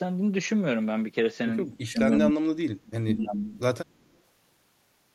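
From 1.71 to 3.4 s the speech drops in and out by as much as around 40 dB for about one and a half seconds, likely an echo canceller suppressing speech in double talk. From 3.88 to 4.19 s an echo leak appears as a very faint copy of the speech, roughly 40 dB down and delayed 177 ms, likely returning from the far-end loudspeaker.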